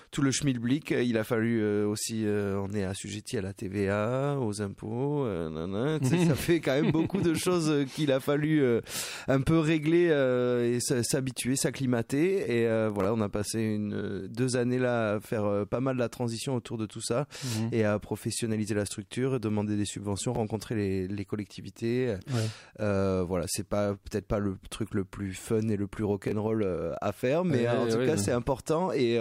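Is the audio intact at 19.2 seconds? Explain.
Yes, at 19.2 seconds the audio plays through cleanly with no dropout, click, distortion or other fault.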